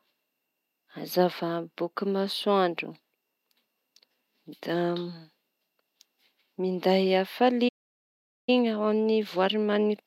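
At 7.68 s the speech cuts out mid-flow and the output goes silent for roughly 0.79 s, resuming at 8.49 s. This is a playback stall, most likely the player running short of buffered data or having its audio thread blocked until it could continue.

From 8.49 s to the end, the speech sounds hurried yet keeps its normal pitch. This is time-compressed catch-up: the player trims its backlog by removing small slices and cross-fading across them, running about 1.1 times faster.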